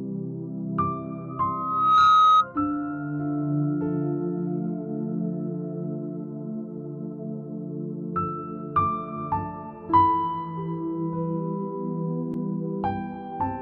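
At about 1.29 s a loudspeaker feedback squeal kicks in. A single tone near 1.3 kHz swells up over the better part of a second until it sits roughly 10 dB above the rest of the sound, then cuts off at about 2.47 s. What's happening is that the mic is hearing its own speaker, and at that one frequency the loop gain tops one, so the tone keeps feeding itself until the loop gets broken.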